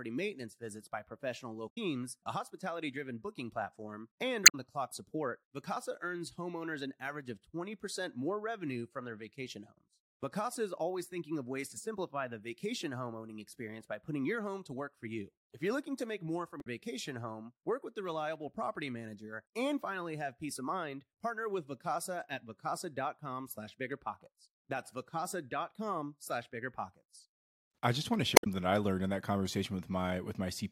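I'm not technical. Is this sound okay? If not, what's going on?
No. There is damaged data in a compressed stream: some stored bits went bad, so the player briefly loses its place and produces short glitches in the speech at 1.66, 4.43, 16.57 and 28.33 seconds.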